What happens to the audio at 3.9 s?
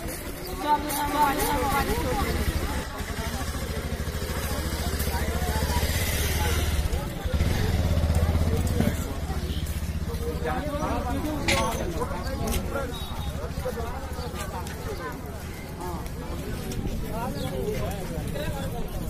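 Nothing goes wrong at 3.9 s; the audio plays through that moment intact, with no dropout, click or distortion.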